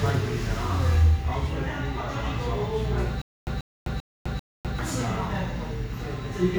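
A stalled player or stream, likely retrying, causes stutter with silent gaps from 3.22 to 4.79 s: a 139 ms fragment repeats four times, separated by 254 ms of dead silence.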